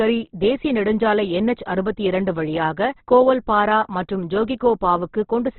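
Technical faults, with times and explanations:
Throughout, Opus compression, likely: the speech is cut off above about 4.1 kHz, so it sounds narrow, and what's left is rough and grainy, like gaps filled with noise instead of real detail. That heavy damage points to a bitrate down around 12 kbps.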